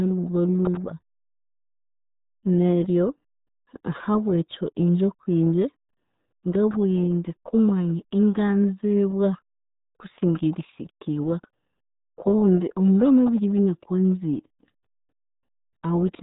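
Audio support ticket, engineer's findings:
RealAudio 14.4 codec, whole clip. Speech band-limited, nothing above 3.8 kHz; muffled, gargly texture throughout, heavy damage. Probable component: RealAudio 1 (14.4) encode stage in the delivery chain. Mechanism: low-rate speech coder discards the upper band and coarsely models the rest; sound fits roughly an 8 kbit/s dial-up stream.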